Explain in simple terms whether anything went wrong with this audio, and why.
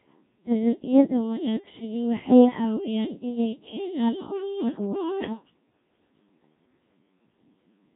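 The whole recording has passed through the Codec 2 vocoder, a very low-rate digital radio codec. It does not keep the original waveform. It sends only a rough outline of pitch, loudness and tone, and the receiver rebuilds the voice from simple sine waves. That is why the speech sounds robotic and buzzy throughout. The damage here is heavy. Nothing is left above 3.7 kHz, so the voice also sounds dull and boxy.

A second problem comes from 4.35 to 5.31 s, right after "waxay caawiyaan inay keenaan". This is GSM signalling bursts. A nearby 2G mobile phone was talking briefly to the network, and the audio wiring picked up its radio pulses. They come through as a galloping dit-dit-dit of short buzzes at about 217 Hz. The buzzing is fairly quiet, well below the speech.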